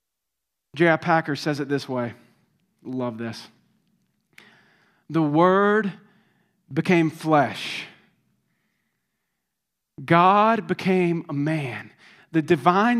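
Speech recording with no technical faults to report. Nothing in it calls for a time or a cause.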